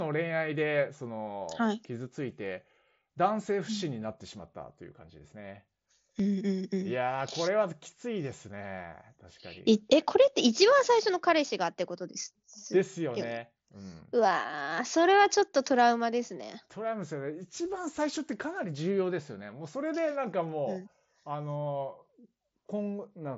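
Nothing here counts as a fault: the speech comes over a Bluetooth mSBC headset link doing its ordinary job, with the top end stopping around 7.7 kHz as you'd expect from that wideband setup.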